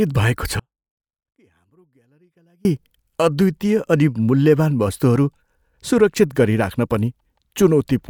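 At 0.60 s the speech drops out abruptly and stays gone until 2.65 s, about 2.05 s in all. It's an audio dropout to a faint residue: only a faint trace of the signal, roughly 40 dB down, hangs on. That's likely a break in the feed with the downstream path still live.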